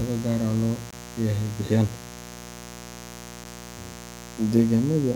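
A steady, raspy mains buzz sits under the speech throughout, about 15 dB below it: switching spikes twice per 60 Hz cycle spray harmonics into the kilohertz range. At 0.91 to 0.93 s, between "gaar loo" and "leeyahay bixiyaan", a short hole appears, and at 3.44 s a brief tick. Each is a block of digital silence, where output was zeroed, likely because the buffer wasn't filled in time. The gaps fit 1024-sample and 256-sample buffers.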